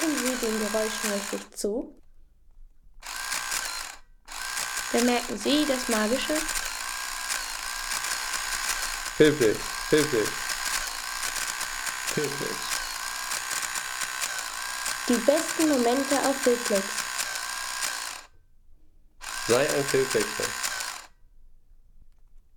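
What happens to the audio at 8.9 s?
A doubled audio track runs from 8.04 to 10.84 s. A second copy trails about 0.7 s behind, about 5 dB quieter, likely from an out-of-step edit.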